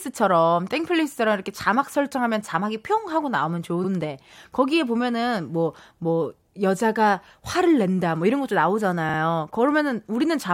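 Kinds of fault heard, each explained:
Repeated frames: the speech stutters twice as a 46.4 ms slice replays, once more at 3.83 s and twice more at 9.08 s, adding 46.4 ms and 92.9 ms. The size fits two compressed frames being sent again and decoded again.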